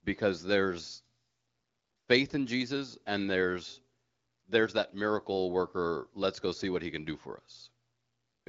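No technical faults can be heard anywhere here.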